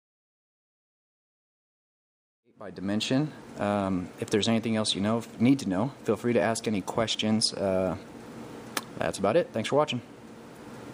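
No technical faults can be heard in this audio.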